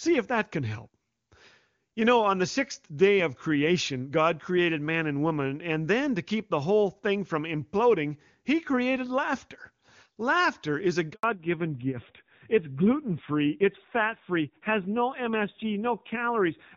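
Right after "is a", at 11.13 s, there's a handover gap: the call switches networks and no speech frames arrive for about 100 ms. The sound drops away quickly and sits silent until 11.23 s, so whatever fell in that stretch is simply gone.

From 11.23 s to the end there's a fallback to narrowband. Up to that point the audio had the open top end of HD Voice, consistent with a high AMR-WB rate. Afterward nothing survives above 4 kHz, which fits AMR-NB at around 7.4 kbit/s. It sounds duller and rougher.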